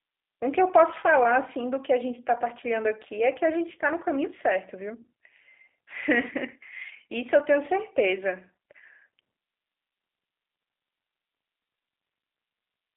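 From start to finish the speech carries G.729 codec damage, and it is plainly audible. Nothing reaches above about 3.7 kHz, and the band sits roughly between 300 Hz and 3.6 kHz, giving a narrow telephone quality. The voice is rebuilt from a vocal tract filter, a pitch predictor and a few pulses per short frame, so it sounds rough and slightly synthetic. That character points to the 8 kbit/s G.729A variant.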